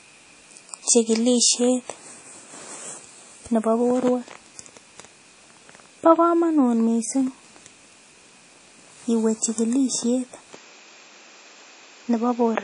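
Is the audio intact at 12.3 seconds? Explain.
No. At 12.3 seconds the audio falls inside a span from 10.54 seconds to the end where the input was likely switched to a poorer device. From that point the band stops near 7.6 kHz, so the sound turns duller. The new device brings its own background noise, roughly 40 dB below the speech. There is no gap at the switch, and the level stays about the same. The change is one of tone and bandwidth.

The whole clip also carries what is likely WMA compression. This transform codec quantises long blocks of the signal. Its error spreads across tens of milliseconds around each sound, and weak spectral lines are discarded. Here nothing remains above about 10.1 kHz, and the damage is plainly audible. It sounds ringing and washy, with hiss that rises and falls with the speech. That fits a low bitrate of around 32 kbps.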